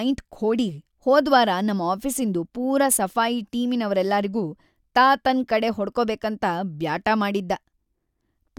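A recording of speech, with no technical fault to point to. Nothing audible in it suggests a problem with how it was captured, processed or delivered.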